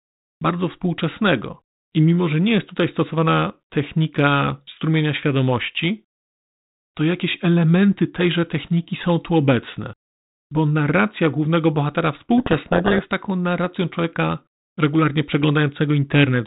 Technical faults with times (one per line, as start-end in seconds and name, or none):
12.38-13.03 codec payload misread